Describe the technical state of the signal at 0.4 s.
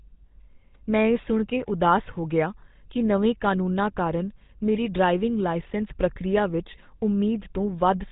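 At 0.4 s the speech carries GSM full-rate codec damage, present across the whole clip. The codec models the vocal tract and drives it with a sparse, regularly spaced pulse excitation, giving a plainly audible buzzy, gravelly roughness, consistent with about 13 kbps. The band stops at 3.8 kHz, but that coarse grain, not mere dullness, separates it from a simple low-pass filter.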